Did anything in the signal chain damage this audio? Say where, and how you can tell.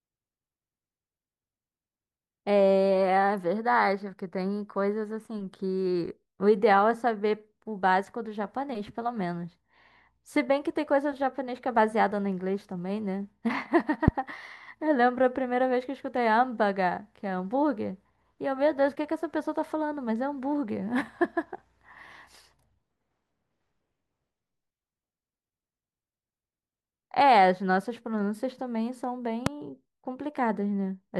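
Yes. There are two loud pops, one at 14.08 s and one at 29.46 s. Each is a single sharp transient lasting about 25 ms and peaking roughly 20 dB above the speech, which continues unbroken beneath it. That points to the analogue wiring stage, likely an electrical step or spike from a connector, switch or static discharge entering the line. The following circuitry shapes that spike into a brief pulse that sits on top of the signal.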